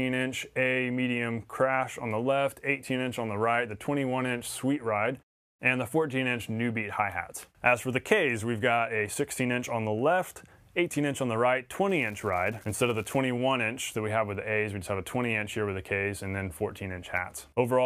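From 11.89 to 13.18 s a steady crackling fizz runs over the sound, continuing through quieter stretches. This is an unreliable data bit: one marginal data line flips at random, so scattered samples jump by the same fixed step of about -34 dBFS.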